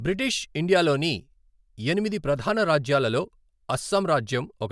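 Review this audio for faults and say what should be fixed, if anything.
Nothing here needs fixing; no faults are audible.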